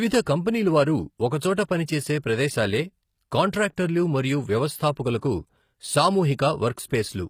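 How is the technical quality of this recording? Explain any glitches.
Two faults run through the entire recording and audibly degrade the speech.

The treble sounds synthetic and coarse from start to finish: sibilants come out gritty and lispy, with a metallic sheen that doesn't quite belong to the lower voice. The likely cause is HE-AAC compression at a low bitrate, in the region of 24 kbps. The codec encodes only the lower spectrum and regenerates the upper bands by copying lower content upward under a rough envelope. The harmonics above the crossover therefore don't align with those below, and the damage is plainly audible.

A fine roughness or hiss also sits on the signal for the whole clip, strongest on loud passages and sharp consonants and absent in pauses. This is sample clock jitter. The converter's clock wanders by roughly a microsecond, so each sample is taken slightly off time. 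Steep parts of the waveform suffer the largest errors, which produces signal-dependent noise around 45 dB below the speech.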